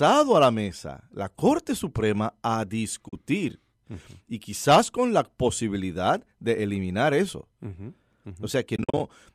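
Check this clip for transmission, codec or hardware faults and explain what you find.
Two dropouts are present, both the same kind of fault, heard against the slight graininess of what is likely low-delay AAC compression.

AAC frame loss with muting, 3.09 to 3.13 s and 8.76 to 9.00 s: when frames go missing, the decoder zeroes their spectrum, and the overlapping windows fade the sound out and back in around each gap. The first hole lasts 40 ms, which fits four 10 ms frames. The second spreads 150 ms of losses across about 240 ms, the longest gap around 50 ms, so the sound flutters in and out in soft-edged breaks.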